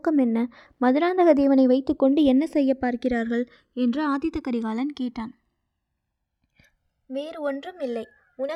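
Throughout the speech, the two channels are running on separate clocks that disagree by a couple of hundred parts per million. The channels are drifting apart, with the inter-channel delay reaching around one and a half milliseconds, so sweeping comb notches give a slow flanging whoosh.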